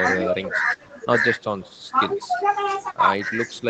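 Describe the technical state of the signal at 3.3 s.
Echo with no canceller at 3.3 s, as throughout: far-end loudspeaker sound re-enters its microphone, returning the speech about 150 ms later, about 23 dB quieter and thinner.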